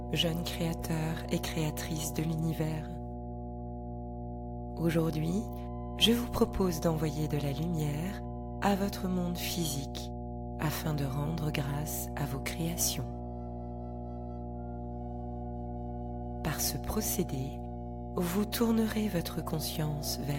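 From the first moment to the end, power-line current is leaking into the signal path, most plausibly through a ground loop or an unshielded transformer close to the cabling. The result is mains hum at 60 Hz, a steady low drone with a few low harmonics stacked above it. It sits only a little below the wanted sound, so it is loud enough to muddy the low end.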